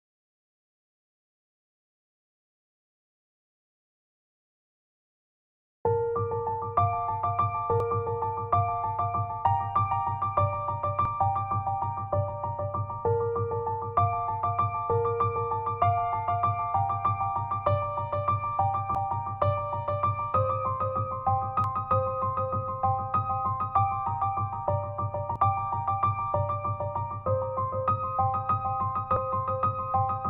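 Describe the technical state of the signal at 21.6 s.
At 21.64 s the sound abruptly jumps ahead by about a third of a second, likely a dropped buffer (overrun). The waveform shows a discontinuity with no gap, and the spectrogram a thin vertical broadband line joining mismatched content.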